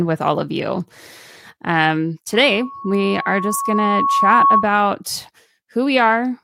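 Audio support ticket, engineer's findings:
Loudspeaker feedback squeal, 2.33–4.70 s: single 1.1 kHz tone swelling over roughly two seconds to slightly above speech level. Mic picking up its own loudspeaker; loop gain exceeds unity there.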